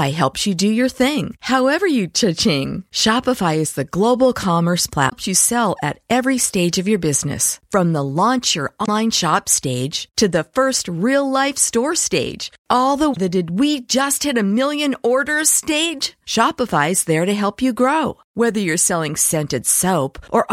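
Speech, with damaged data in the compressed stream hitting three times: 5.06–5.13 s after "global commerce", 8.82–8.89 s after "the launch your", and 13.10–13.17 s after "store stage all the". Each is a short glitch where the decoder loses sync on bad frames.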